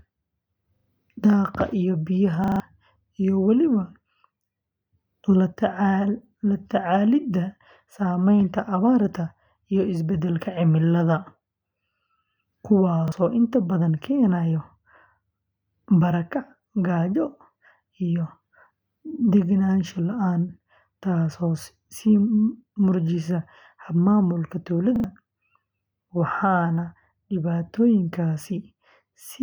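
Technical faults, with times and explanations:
0.76–0.88 s (just before "daaqa iyo"), 2.44–2.6 s, 13.08–13.12 s, 24.96–25.04 s: repeated buffer. Late audio forced the device to replay its last block, which fits a 40 ms buffer, so the speech stutters with hard joins, losing up to about 150 ms.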